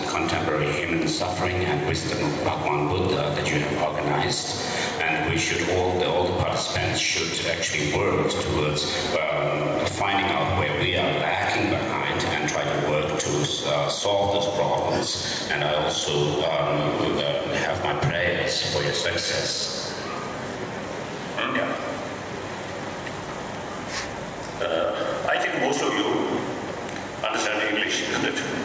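Gain pumping runs through the whole clip: the gain ducks by around 10 dB under every loud sound, likely from input gain set far too high with a fast limiter reacting.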